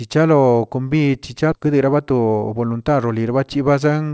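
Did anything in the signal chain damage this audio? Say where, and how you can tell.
Yes. At 1.52 s the speech skips ahead in a network and jitter buffer fault: roughly 0.7 s of audio is simply missing, with no gap or filler, and the two sides butt together. Unlike a packet-loss concealment gap, nothing is smeared or repeated.

From 1.66 to 2.81 s a jitter buffer speed-up follows. After the backlog, the receiver trimmed short pitch-period slices, cutting about 150 ms, so the speech runs at 110% speed with unchanged pitch. A resampling error would have shifted the pitch. Over the G.722 path, content stops at 8 kHz.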